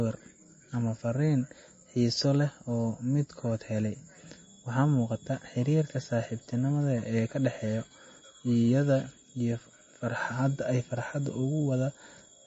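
From start to finish, the speech carries plainly audible damage of the kind MP3 compression leaves. The treble stops dead at about 7.8 kHz, so s sounds lose their edge and turn dull. Weak frequency detail flickers in and out between frames. That gives a watery, swirling texture with metallic chirps on sibilants. Consonant attacks smear. The likely cause is an MP3 encoder starved of bits, which fits a low bitrate near 32 kbps.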